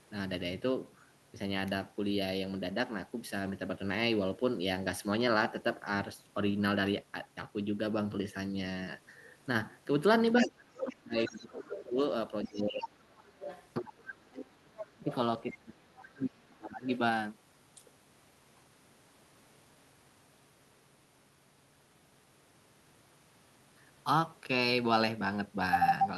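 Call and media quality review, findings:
Other side's voice leaking through: far-end speech under the talker at 10.37–11.85 s (about 10 dB down), 12.45–13.68 s and 14.77–16.05 s (about 15 dB down), plus a 50 ms scrap at 16.93–16.98 s (about 20 dB down). Likely residual loudspeaker echo the echo canceller didn't fully subtract from the mic.

Speech suppressed in double talk: talker dips hard while the far end is talking, at 10.4–13.02 s (about 2 s affected, down roughly 30 dB at worst) and 13.77–16.88 s (about 3 s affected, roughly 35 dB at worst). Likely the echo suppressor couldn't separate the near talker from the echo during overlap and ducked both.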